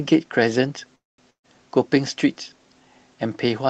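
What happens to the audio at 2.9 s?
Nothing goes wrong at 2.9 s: the speech passes through intact, carried by the call path as normal with its codec's usual band-limited sound.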